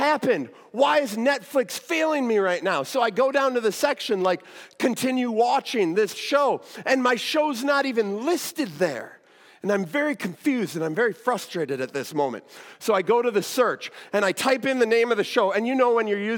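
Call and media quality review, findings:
No faults found in this recording; nothing to attribute to any component in the capture, transport or playback path.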